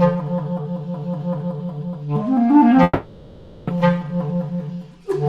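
From 2.83 to 3.70 s the sound smears into a fading buzz, then returns with 0.84 s lost, likely a long network dropout.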